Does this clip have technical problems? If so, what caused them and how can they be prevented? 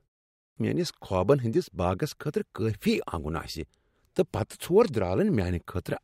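Yes. A clipped start after a pause occurs at 0.32 s, following 0.32 s of silence: the output device had gone idle and needed about 247 ms to wake, so the sound returns abruptly at 0.57 s with its opening missing. Keeping the output stream active through silences, or disabling the device's power-saving sleep, prevents this.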